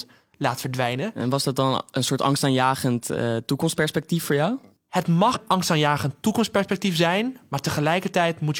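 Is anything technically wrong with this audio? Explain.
Yes. Compressed frames skipped at 5.31 to 5.37 s: about two 42.7 ms frames were missing or rejected by the decoder, so the speech jumps ahead roughly a tenth of a second just before "angstaanjagend toekomstperspectief zijn". The join where the speech resumes is heard as an abrupt jump.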